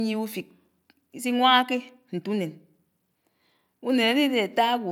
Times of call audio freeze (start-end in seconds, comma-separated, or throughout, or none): none